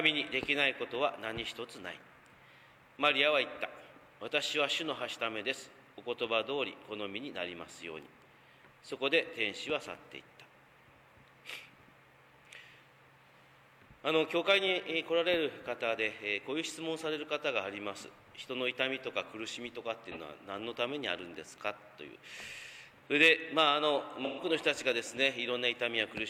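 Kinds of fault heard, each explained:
AAC frame loss with concealment: frames lost near 20.1 s and 24.2 s were rebuilt from earlier spectrum, leaving brief smeared, noisy patches lasting 43 and 128 ms.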